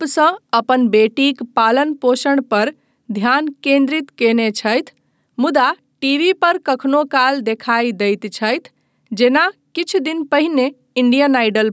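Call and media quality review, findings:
Gain pumping throughout the speech: loud and soft parts squashed closer in level, roughly 5 dB swing. Likely input gain set too hot, fast limiter clamping down. Call mic high-pass fine, nothing above 8 kHz.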